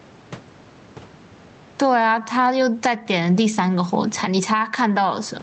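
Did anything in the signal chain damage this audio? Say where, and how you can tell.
Yes. Gain pumping runs throughout. The gain swings by around 15 dB. Likely excessive input gain driving a fast limiter.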